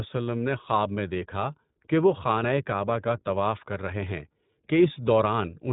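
Speech passed through the iLBC codec for its full length, with nothing above 3.8 kHz and a plainly audible rough, synthetic quality. Each frame's excitation is coded independently, consistent with 20 ms frames in the 15.2 kbps mode, which leaves the narrowband, grainy texture.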